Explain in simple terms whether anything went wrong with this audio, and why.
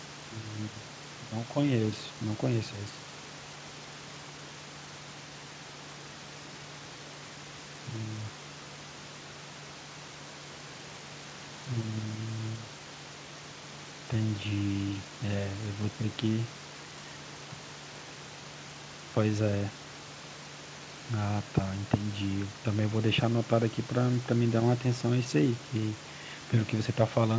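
Nothing went wrong here: the background noise sitting well below the speech comes from the room where it was recorded, and the slightly dulled top end is simply what an ordinary call connection does to sound.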